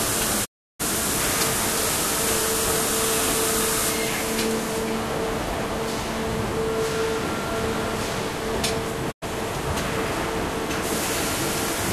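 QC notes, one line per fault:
0.44–0.81 s, digital broadcast dropout: the sound fades out over 20 ms, then goes silent for 0.34 s while the receiver mutes on lost frames. The waveform shows a flat gap and the spectrogram a blank vertical band.
9.10–9.24 s, digital broadcast dropout: a shorter 96 ms mute with the same 20 ms fade, consistent with a few failed frames. It appears as a narrow empty stripe across all frequencies.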